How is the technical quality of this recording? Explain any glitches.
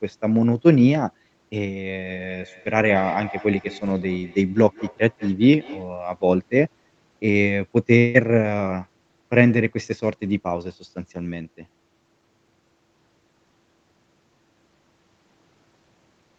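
The recording has one clear fault, a feedback echo between two devices, and the sound is band-limited with nothing above 8 kHz, as expected from a call path. From 1.95 s to 5.94 s, the speech comes back at a steady interval of roughly a fifth of a second, peaking at about 18 dB below the speech. A second device on the same call replays the signal into a microphone, and neither echo canceller removes the other's playback. The fixed spacing of the repeats, each thinner and more ringing, distinguishes this from room reverberation, which smears smoothly rather than repeating.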